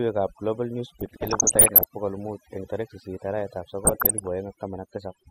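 From start to finish the speech carries overdone noise removal. The noise reduction is set far too aggressively, so any frequency band whose level sits near the estimated noise floor is pulled down hard or gated off entirely, and the softer parts of the voice are caught with it. Between phrases the background falls to near silence dotted with twinkling specks.

Two stretches, 0.99 to 1.84 s and 3.85 to 4.27 s, show DAB burbling. Weak reception lets bit errors slip past error correction into the MP2 stream, at a rate on the order of one or two percent. Corrupted samples put short blips of noise into individual sub-bands, and corrupted scale factors make sub-bands jump in level for up to a frame, and this happens across most frames in both stretches. The result is burbling laid over the speech.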